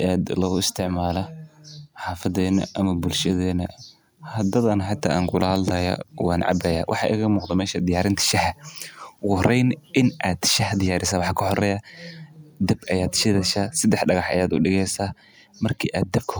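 No technical faults can be heard anywhere in this speech recording. Nothing in the audio calls for comment on technical grounds.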